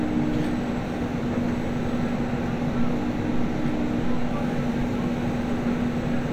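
No technical faults can be heard anywhere in this recording of sounds. Nothing in it calls for comment at any point.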